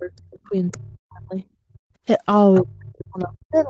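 Speech recorded over a call, band-limited to 8 kHz by the call path. From 0.0 to 1.43 s and again from 2.6 s to the end, the talker's voice dips and breaks up, with drops of around 40 dB. This is speech suppressed in double talk. The likely cause is the echo canceller treating overlapping speech as echo and turning everything down. A second voice leaks through at 0.71 to 0.77 s, 0.93 to 0.98 s, 2.54 to 2.71 s and 2.98 to 3.04 s. It is faint, roughly 15 to 30 dB below the talker. This is the other side's voice leaking through, likely loudspeaker echo the canceller did not fully remove. Between 1.71 and 1.98 s the room sound drops away by about 40 dB, then returns. This is background gated by the echo canceller, which clamped the microphone while the loudspeaker played.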